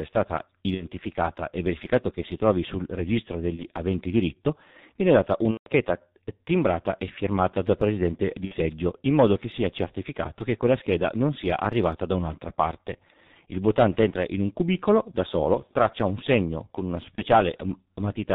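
From start to finish the speech sounds muffled and hoarse, with consonants smeared and nothing audible above 4 kHz. That is the G.723.1 codec at heavy damage, with a rough quality that fits its 6.3 kbit/s mode. The codec works in 30 ms frames and updates its model of the voice only slowly, so rapid changes in the speech get blurred.

Five brief dropouts then break up the speech, at 0.75–0.88 s, 3.56–3.64 s, 5.51–5.69 s, 8.45–8.55 s and 17.15–17.21 s. In each, the sound is stretched into a buzzy tone or a coloured noise that fades away, and the voice stays weak for a moment after normal audio returns. The longest is at 5.51 s, lasting about 0.18 s. This is VoIP packet loss concealed by the speech codec. Packets went missing, and the decoder filled each gap by repeating its last pitch and filter settings at falling gain. The gap lengths fit whole 30 ms frames. Because each decoded frame builds on the previous one, the recovery lags behind the returning packets.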